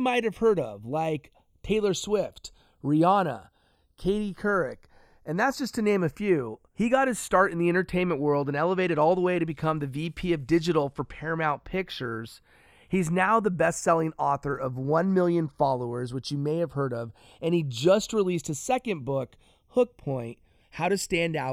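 Throughout the speech, the channels drift apart: mismatched clocks roughly 40 ppm off slide the delay toward about 0.4 ms, so the mono sum flanges slowly, with comb notches sweeping visibly across the spectrogram.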